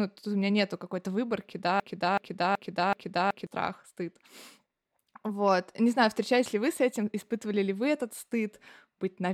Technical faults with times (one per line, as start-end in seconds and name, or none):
1.80-3.47 broken-record loop